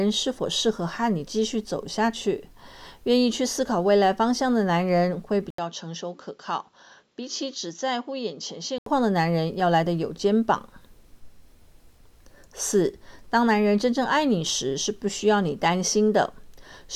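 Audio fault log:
5.50 to 8.86 s, input switched to a poorer device: the recording path likely jumped to a different, lower-grade input and then returned. After an 80 ms gap at the switch, the audio loses everything above 7.6 kHz, so it turns dull and boxy. It also drops to around 10 dB quieter and picks up a faint background hiss of its own. At 8.86 s the full bandwidth and original level return just as abruptly.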